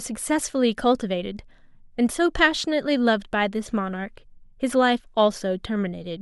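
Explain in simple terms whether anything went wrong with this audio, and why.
Nothing went wrong here; no faults can be heard.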